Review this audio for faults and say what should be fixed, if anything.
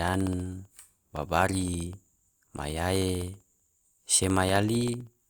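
Periodic USB or driver dropouts run from 0.08 s to 5.20 s, about seventy of them evenly spaced every 64 ms, roughly fifteen per second. Each time, something blocks the USB bus or the audio driver briefly, and about half a millisecond of the speech is lost and replaced with silence. These tiny gaps cut the waveform abruptly, so they come through as a regular ticking that sounds only where there is signal. To prevent this, find and stop the background task or faulty driver that stalls the audio interface at this fixed interval, and give the audio path a larger buffer.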